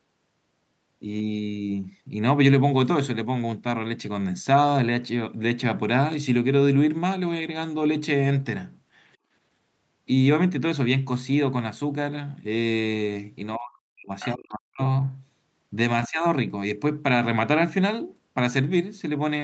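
At 9.18 to 9.31 s there's a short case of background gated by the echo canceller. The canceller clamped the mic while the far end was playing, so the room tone dips by about 18 dB for a fraction of a second, then comes straight back.

From 13.57 to 14.12 s the talker's speech drops away almost completely, by a very deep amount. That's likely speech suppressed in double talk: both sides were talking, and the canceller couldn't tell the local voice from loudspeaker echo, so it ducked everything.

Right after, at 14.20 to 14.28 s, a brief scrap of a second voice slips through, well below the talker's level. It's most likely the other side's voice leaking through, with loudspeaker echo the canceller didn't fully remove.

The double-talk suppression returns at 14.34 to 14.81 s with another near-total cut. It comes back once more at 16.08 to 16.25 s, this time a shallower dip of roughly 25 dB. 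Each time the same overlap makes the canceller pull the mic down, and the speech dips while it holds.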